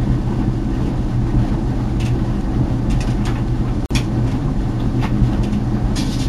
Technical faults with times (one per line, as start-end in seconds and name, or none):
3.86-3.91 gap at a join of encoded pieces